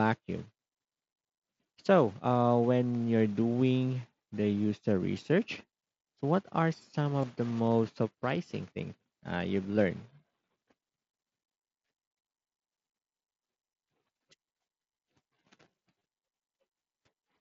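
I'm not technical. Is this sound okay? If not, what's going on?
No. Concealed Bluetooth headset packet loss occurs at 7.22 s, between "so what are some" and "the most surprising things", and again at 15.99 s. Each time about 15 ms of sound never reached the phone, which patched the gap by repeating a matching slice of the sound just before it.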